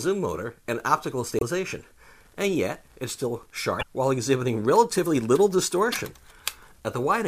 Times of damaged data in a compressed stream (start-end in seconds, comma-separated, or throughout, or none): 1.37-1.43, 3.79-3.83, 5.92-5.95